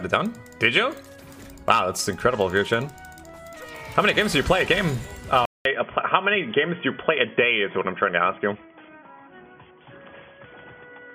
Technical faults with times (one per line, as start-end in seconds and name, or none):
5.45-11.15 input switched to a poorer device